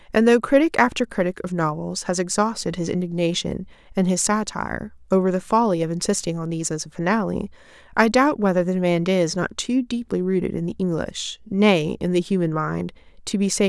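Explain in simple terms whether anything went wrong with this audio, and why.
Nothing went wrong here.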